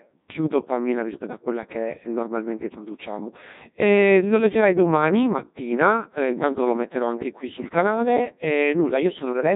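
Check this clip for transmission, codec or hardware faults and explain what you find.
There's one fault, and it runs the whole way through: a Codec 2 vocoder. Only pitch, voicing and envelope get sent, so the speech is resynthesised from sine waves. It comes out heavily robotic and buzzy, with nothing above 3.8 kHz, which fits a 1.6 kbit/s mode.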